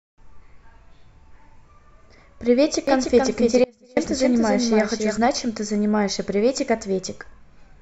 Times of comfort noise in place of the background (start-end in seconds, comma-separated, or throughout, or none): none